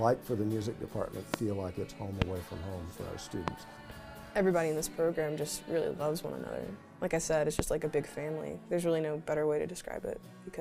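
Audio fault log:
1.34–1.36 s, 2.22–2.24 s, 3.48–3.50 s, 7.59–7.62 s: loud pop. Each is a single sharp pop, about 20 to 25 dB above the sound, which carries on underneath. The likely cause is a sudden voltage step or pulse, such as static or a switch, added to the signal.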